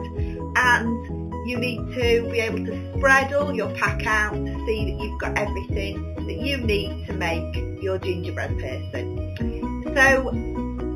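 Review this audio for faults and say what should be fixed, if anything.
Imaging from linear upsampling runs throughout: the top of the band is dulled near 4 kHz and a faint mirrored copy sits between 4 kHz and 8 kHz, roughly 25 dB down, giving a light metallic shimmer. On a spectrogram it appears as content reflected upward across 4 kHz, which fits 8 kHz material raised to 44.1 kHz by straight-line interpolation. Resample with a proper windowed-sinc or polyphase low-pass filter instead.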